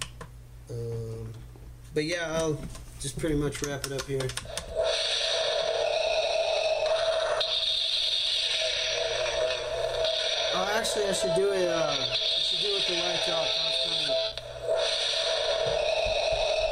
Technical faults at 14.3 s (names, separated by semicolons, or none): gap between stream segments